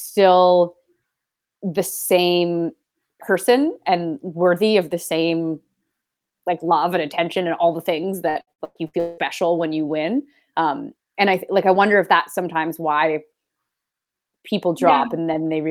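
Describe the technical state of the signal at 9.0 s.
At 9.0 s, repeated packet loss (robotic sound) runs from 8.29 to 9.21 s, between "and all the things" and "when you win um". Six gaps, up to 181 ms, are filled by extending earlier sound, giving a choppy texture rather than one clean dropout.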